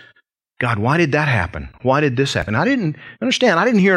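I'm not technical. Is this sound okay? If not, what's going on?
No, not quite. At about 2.42 seconds there's a tiny skip in the speech where a sliver of sound goes missing. That's an overlap between stream segments. The audio is delivered in chunks, here roughly 2 seconds each. Two neighbouring chunks were marked as covering the same moment, so the player threw away the shared bit even though it wasn't actually repeated. The sound then jumps ahead, and you hear that jump as a small skip.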